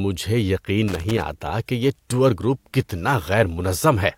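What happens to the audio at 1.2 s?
At 1.2 s the speech is inside a burst of loose connector crackle running from 0.88 to 1.30 s. A worn or dirty contact is making and breaking intermittently, chopping the signal into irregular fragments. This produces a scratchy, uneven crackle for about 0.4 s.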